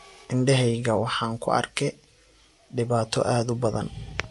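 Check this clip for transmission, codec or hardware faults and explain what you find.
One fault runs through the whole recording: the speech shows clear MP3 compression damage from start to finish. There is no content above about 11.3 kHz, a hard treble cut-off that points to a low bitrate in the region of 48 kbps, most likely from MP3 encoding. Short of bits, the encoder drops weak spectral lines, which flicker on and off between frames. This gives sibilants and the upper range a watery, swirling quality, and consonant onsets sound smeared.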